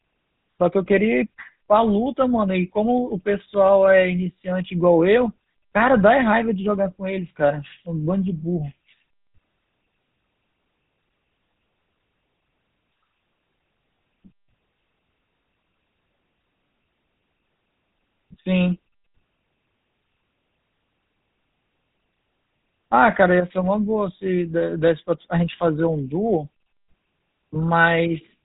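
Speech runs through the GSM full-rate codec for the whole clip. The top end is gone, with nothing above about 3.8 kHz, so the sound is dull and narrow. The codec models the vocal tract and drives it with regular pulses, keeping only every third sample of the excitation. The damage is plainly audible throughout. It fits the 13 kbps rate of that early mobile codec.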